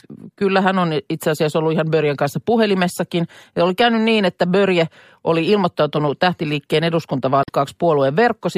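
A short speech recording with one brief glitch near its end, from about 7.41 to 7.49 s. That is damaged data in a compressed stream: corrupted bytes there made the decoder misread those frames and lose sync until it found the next valid frame header.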